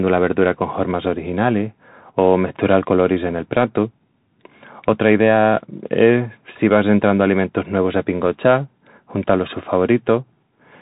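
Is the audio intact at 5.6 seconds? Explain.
No. At 5.6 seconds the speech carries Bluetooth CVSD headset codec damage, as it does throughout: one-bit 64 kHz delta coding cuts everything above 4 kHz, leaving scratchy sibilants and granular hiss.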